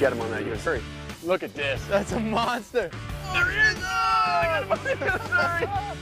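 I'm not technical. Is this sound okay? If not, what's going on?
No. There are two compressed frames skipped events, at 0.66 and 4.42 s. Missing chunks make the audio jump ahead about a tenth of a second, then a few milliseconds.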